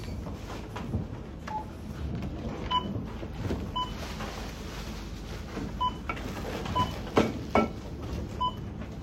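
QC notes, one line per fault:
No fault found on this recording of sounds.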